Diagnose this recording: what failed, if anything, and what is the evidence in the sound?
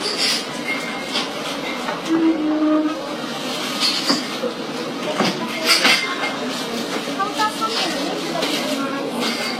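The fault sits at the codec stage: transcoding between lossy codecs, likely an HE-AAC file re-encoded more than once. Throughout, the sound carries two mixed flavours of smearing, with nothing above 16.3 kHz. A single low-bitrate encode would give one uniform artefact character, not these stacked textures.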